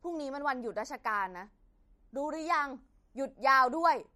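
MP3 compression damage runs through the whole clip: nothing sounds above 15.4 kHz, and the speech turns plainly watery and swirly, with smeared attacks. The likely cause is an encoder short of bits, cutting the treble and letting weak frequency lines flicker between frames, which fits a bitrate near 46 kbps.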